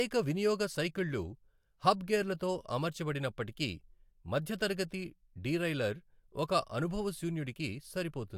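Nothing in this recording reveals any technical fault.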